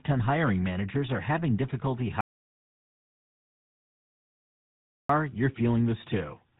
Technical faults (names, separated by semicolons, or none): GSM full-rate codec; audio dropout to silence